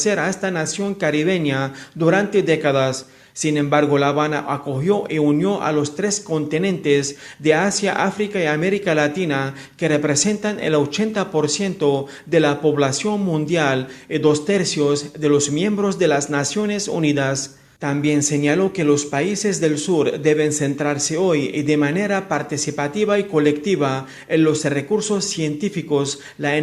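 No technical fault can be heard anywhere in the recording, and the signal holds steady throughout.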